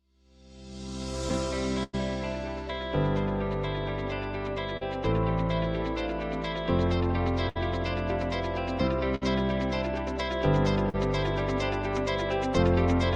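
Burst of packet loss occurs at 1.83 to 1.95 s, 7.49 to 7.57 s and 9.15 to 9.23 s. About 100 ms of audio is lost in the first gap and about 60 ms in each of the others. At each gap the receiver extends the last sound it had and fades it out, so you hear a held buzz or a dying hiss. The audio then picks up further along, with that stretch gone. Short concealed packet loss appears at 4.77 to 4.83 s and 10.89 to 10.95 s. Roughly 40 ms goes missing each time, and the receiver covers it by continuing the preceding sound, following its pitch where there is one or using shaped noise where there isn't, before blending back into the real signal. Each patch comes across as a brief smear or wobble, and any very short sound inside it can disappear.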